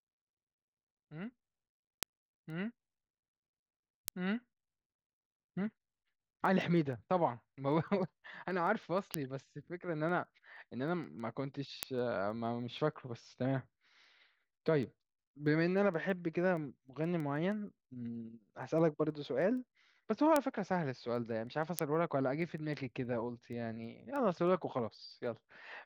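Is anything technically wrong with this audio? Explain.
Yes. Word clock ticks run through the speech from 0.13 s to 25.74 s, recurring at a steady rate of roughly one every 0.15 s. The receiving device is clocked independently of the digital source, and a mismatch of around 150 ppm makes the two clocks slip past each other repeatedly. At each slip, one sample is dropped or repeated and neighbouring samples are misread, producing a short, sharp click.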